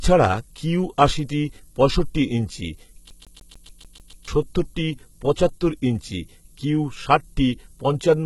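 From the first moment to the end, a steady hiss sits under the speech. It is thin and rises sharply toward the treble. This is low bit depth with noise shaping. The samples are rounded coarsely, and the rounding error is pushed up into the high frequencies. The grain points to a word length of about 9 bits. The hiss sits roughly 25 dB below the speech.

The whole clip also sounds band-limited and processed. Nothing is present above 11.8 kHz. The upper treble sounds bright but synthetic. Sibilants come out gritty and metallic, and the upper harmonics do not sit naturally with the lower ones. The likely cause is HE-AAC compression, heavily applied, consistent with a rate near 16 kbps. The top band seems rebuilt from copies of lower bands rather than carried from the source.

From 3.10 s to 4.28 s, the speech catches and stutters. A fragment about 0.15 s long plays eight times in a row. There is a brief mute at each jump. 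The pattern is fast and evenly spaced. This is a CD stuck on one turn. A surface flaw keeps knocking the pickup back one track at the same spot on every revolution. The stutter then breaks off, and playback moves on.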